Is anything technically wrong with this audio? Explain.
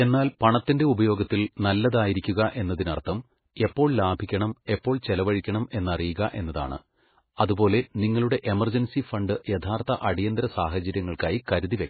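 Yes. Throughout the speech there is heavy MP3 compression damage. Nothing is present above about 4.5 kHz, so the treble is cut off flat. The sound is watery and swirly, and s sounds turn into metallic chirps. Consonant attacks smear. The likely cause is an encoder starved of bits, which fits a bitrate around 16 kbps. It drops the high band entirely and zeroes weaker frequency lines. Those lines then flicker on and off between frames.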